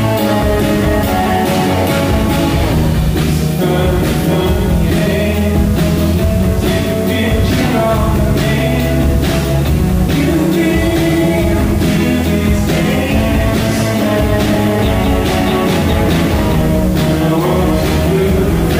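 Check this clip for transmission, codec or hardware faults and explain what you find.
There is one fault, present for the whole clip: low bit depth with dither. The signal was stored with far too few bits per sample, which fits about 6 bits. Dither was added before each sample was rounded to those few levels, so the rounding error became random and independent of the signal. The result is a constant, even white hiss sitting only about 20 dB below the sound, but with no harsh or gritty distortion.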